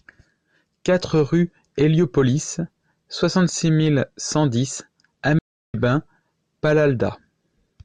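A speech clip with one playback stall: at 5.39 s the sound cuts out mid-flow and stays silent for about 0.35 s, resuming at 5.74 s. The likely cause is the player running short of data or its thread being blocked. On a waveform this shows as a flat, empty gap; a spectrogram shows a clean vertical blank band across all frequencies.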